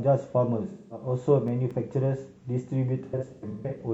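AAC frame loss with concealment at 0.69 to 1.06 s: about 213 ms of coded audio, consistent with roughly five frames, went missing. The decoder rebuilt the gap from the last good spectrum, so the speech turns briefly smeared and noisy instead of dropping out.

CD scratch ticks follow from 1.48 to 2.15 s. A disc blemish defeated error correction on successive rotations, leaving four evenly spaced ticks of uneven strength, each under a millisecond, where the player interpolated or muted damaged samples.

AAC frame loss with concealment returns from 3.05 to 3.79 s. About 384 ms of losses are scattered across roughly 680 ms, the longest run around 150 ms. Each concealed stretch sounds washed and phasey.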